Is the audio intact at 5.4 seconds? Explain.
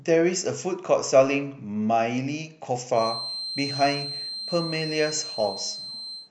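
No. At 5.4 seconds a feedback whistle is present. It starts at 2.91 s and lasts to the end of the clip at 6.30 s. It is a thin, steady tone near 4.1 kHz, sitting roughly 10 dB below the speech. Its level swells and fades slowly. The likely cause is a loudspeaker-to-microphone loop held just at the edge of feedback. One frequency keeps ringing there but never builds up into a runaway howl.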